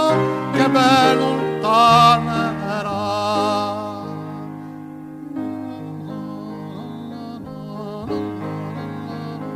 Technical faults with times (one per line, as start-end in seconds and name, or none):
none